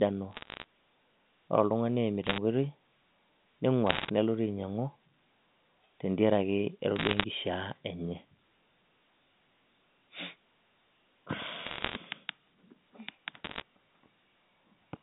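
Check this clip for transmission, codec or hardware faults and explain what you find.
Bursts of bit errors on a digital phone line are audible in six places: 0.31–0.64 s, 2.24–2.38 s, 3.87–4.10 s, 6.96–7.24 s, 11.66–11.96 s and 13.44–13.62 s. Flipped bits corrupt single samples in the G.711 A-law stream, with roughly 0.4 to 1.5 percent of bits wrong. Hits on the sign or high bits jump the waveform, producing sharp ticks that cluster into crackle over the speech. The speech itself keeps its narrow telephone band, about 150 Hz to 3.7 kHz.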